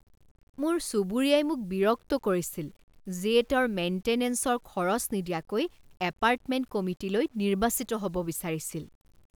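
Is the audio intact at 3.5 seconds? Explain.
No, low bit depth without dither covers the whole clip: grainy distortion follows the speech, likely from 9-bit rounding, sitting about 40 dB down.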